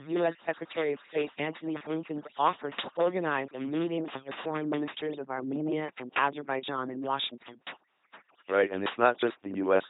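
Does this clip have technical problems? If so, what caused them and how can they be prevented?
Yes. Overdone noise removal runs through the whole speech clip. Noise reduction set far too strong pushed individual frequency bands down or out whenever they sat close to its noise estimate, so the background collapses to near silence dotted with twinkling specks, and the quieter parts of the voice are stripped away. On a spectrogram the gaps between syllables show as dark, empty regions scattered with isolated bright flecks, and the voice's weaker harmonics break into patchy islands. Keeping the reduction amount moderate and checking the result by ear prevents this.

The whole clip has also been coded with the LPC-10 vocoder at 2.4 kbit/s, and the damage is heavy. This codec rebuilds speech by passing either a buzzy pulse train or noise through a simple ten-pole vocal tract filter, deciding at each instant that the sound is entirely voiced or entirely unvoiced. 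The result is a mechanical, buzzing robot voice, with stray buzz or hiss where that decision goes wrong. A spectrogram shows nothing above 3.8 kHz, smooth blurred formant bands, and perfectly regular pulse striations in place of natural harmonics. Using a modern wideband speech codec at an adequate bitrate prevents this.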